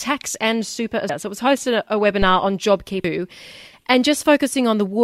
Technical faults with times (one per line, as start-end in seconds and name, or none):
1.09 damaged data in a compressed stream
2.22-2.43 phantom power thump
3.04 damaged data in a compressed stream